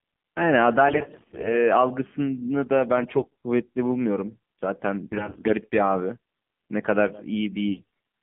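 Speech carried over a 2G/3G mobile link with the AMR narrowband mobile codec. The sampling is 8 kHz and the line band runs only from about 150 Hz to 3.4 kHz, so nothing of the upper spectrum survives. Each 20 ms frame rebuilds the voice from a vocal-tract model driven by a few pulses, and at a low rate, which fits the 7.4 kbps mode, the result is plainly buzzy and synthetic. AMR bit errors also strike at 0.88–1.55 s, 2.97–3.25 s, 5.08–5.55 s and 7.68–7.84 s. In these spans a weak radio link flipped the lightly protected bits of many frames while the checksum on the core bits still passed, so the decoder accepted damaged data. The excitation pulses land in the wrong positions and the fine pitch, gain and spectral values drift. Pitch and level hold roughly steady, but the voice turns hoarse, scratchy and gargly.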